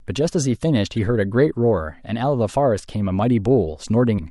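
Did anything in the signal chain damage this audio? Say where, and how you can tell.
Yes, at the codec stage: damaged data in a compressed stream gives short blips at 0.97 s and 4.14 to 4.19 s, where the decoder misreads corrupt frames and loses sync.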